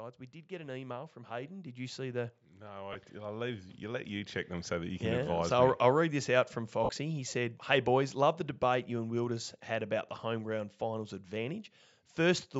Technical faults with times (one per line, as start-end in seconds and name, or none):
0.47-4.45 automatic gain rising
2.93-2.95 lost LE Audio frames
6.84-6.89 lost LE Audio frames